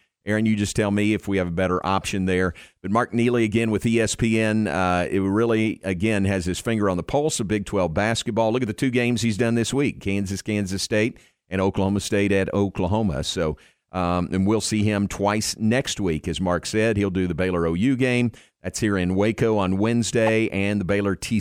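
At 20.27 to 20.29 s, near the end of the speech, a corrupt frame decoded produces a brief chirp, squeak, blip or burst of noise. Damaged bits in a couple of compressed frames were played anyway, misplacing energy in frequency and peaking at around -10 dBFS.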